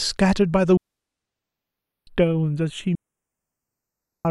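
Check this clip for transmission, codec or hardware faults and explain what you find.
Two faults are present in this speech clip: the stereo channels slowly drift apart in time for its whole length, and there are two digital wireless dropouts.

Channels drifting apart run throughout. The two channels appear to be recorded on separately clocked devices whose rates differ by a few tens of parts per million, so the delay between them creeps from nothing to a fraction of a millisecond by the end. When the channels are summed to mono, the comb-filter notches this creates move slowly, giving a gentle, gradually sweeping flange on the speech. The sweep is what separates it from a fixed-offset comb, which sounds hollow but static. It also travels in one direction only, unlike a flanger effect, which moves back and forth.

The digital wireless dropouts fall at 0.77 to 2.07 s and 2.95 to 4.25 s, each a 1.3 s mute. 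Each time, the receiver lost too much of the link's data and muted its output behind a very quick fade. The result is a clean hole of near silence in the speech. No hiss, crackle or noise burst sits at either edge, and that is what distinguishes it from an analog wireless dropout, which bursts into noise as the signal fails.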